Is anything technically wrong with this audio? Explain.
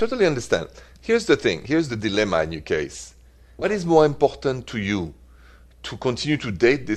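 No, nothing in this speech recording stood out as technically wrong on listening.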